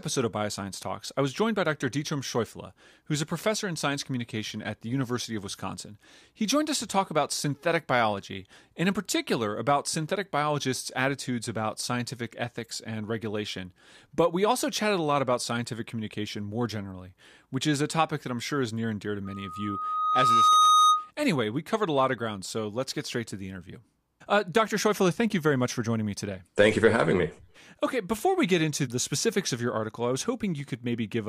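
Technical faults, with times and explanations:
19.25 to 21.11 s, loudspeaker feedback squeal: a single 1.2 kHz tone swells over about a second and a half into a piercing squeal, ending up well above the speech. The microphone is picking up its own loudspeaker, and at that frequency the loop gain exceeds one, so the tone keeps feeding itself.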